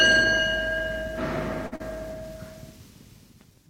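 At 1.66 to 1.74 s, a short stall from a late packet holds the last sound for 53 ms, adding delay. It appears as a flat, smeared spectrogram band with repeating waveform cycles.

At 1.76 to 1.82 s, a short concealed packet loss drops 60 ms, patched with 39 ms of extrapolation. It appears as a blurred spectrogram patch.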